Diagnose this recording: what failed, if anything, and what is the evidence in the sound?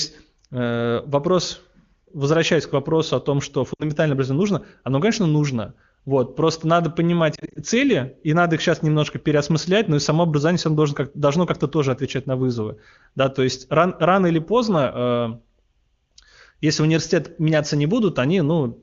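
Lost AMR speech frames, from radio errors at the network stage. After "вопросу о том что", 3.73–3.83 s, three frames (60 ms) are lost and the sound drops to near silence within two frames. After "просто надо понимать", 7.35–7.59 s, it gives brief separate warbles. These are not hard dropouts: the decoder carries the last pitch forward with falling gain instead of cutting to silence.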